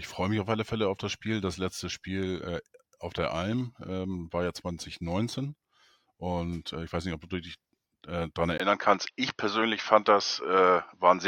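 A speech clip whose sound changes character abruptly at 8.58 s and stays that way to the end. A brief gap of about 20 ms marks the switch. After it, nothing is heard above 6.4 kHz, so the voice turns duller and boxier, and a new noise floor appears, roughly 50 dB below the signal. Loudness holds at about the same level. This is likely an input switched to a poorer device, a narrower-band microphone or headset call profile taking over mid-recording.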